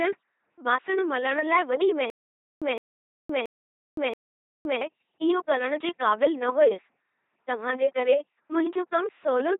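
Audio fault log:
throughout: LPC-10 vocoder. The speech has a buzzing, mechanical robot quality, with harsh buzz or hiss wherever voicing is misjudged, and nothing above 3.8 kHz. A 2.4 kbit/s LPC-10 coder rebuilds each moment from a short all-pole filter fed by either pulses or noise.
2.10–4.81 s: stutter with silent gaps. Right after "बासण मलण लाइ वॾी", a 163 ms fragment repeats four times, each followed by 516 ms of dead digital silence, every 678 ms. The likely cause is a stalled stream replaying its last buffer on each retry, losing the audio in between.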